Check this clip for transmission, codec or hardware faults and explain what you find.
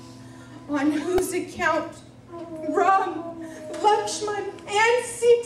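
One fault: a repeated buffer at 1.18 s. New audio arrived late, so a 1.33 ms block, fitting a 64-sample buffer, played four extra times, losing about 5 ms. It's heard as a click-buzz. The waveform shows identical repeating cycles; the spectrogram shows a thin vertical streak.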